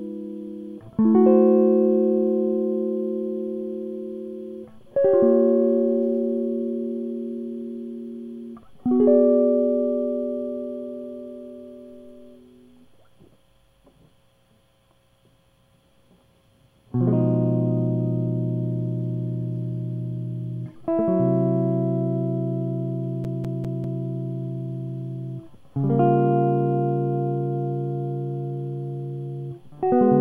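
Music that catches at 23.24 s and stutters: the same 0.2 s fragment plays four times in a fast, even loop, with a brief mute at each jump, until 24.04 s. That is a CD stuck on one turn, where a scratch knocks the laser back one track on every revolution.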